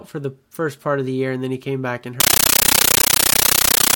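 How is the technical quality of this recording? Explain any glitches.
The recording breaks down near its end. At 2.20 s, right after "he came back and", a compressed stream played as audio takes over until the end. An undecoded Dolby Digital bitstream is being read as samples, which fits 640 kbps AC-3. Each 13.3 ms burst of noise is followed by silence, 31.25 times a second. It sounds like very loud, chattering static.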